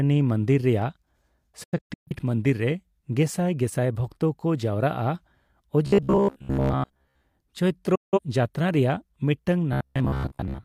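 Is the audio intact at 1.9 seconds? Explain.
No, a digital broadcast dropout runs from 1.64 to 2.13 s. The receiver muted on failed frames, leaving several short silent holes with quick 8 ms fades, the longest 128 ms.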